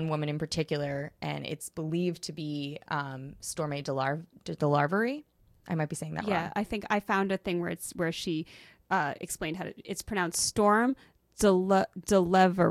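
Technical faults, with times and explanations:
10.88 s, compressed frame skipped: the audio jumps ahead after "how to it's pronounced", as about 20 ms, one whole frame, never gets decoded.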